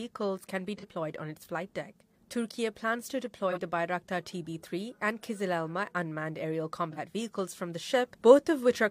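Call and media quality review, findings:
AAC frame loss with concealment at 0.77–0.85 s, 3.51–3.58 s and 6.92–6.99 s. Each gap is roughly 43 ms, consistent with a single lost frame. It is heard as a brief smeared, noisy patch where the decoder resynthesises from the previous good spectrum. Component: decoder / transport.

Sudden gain jump at 7.90 s, held to end of clip. Signal and background noise step up together by about 4 dB with no ramp. Likely cause: a gain setting or bit shift applied instantaneously in the digital path.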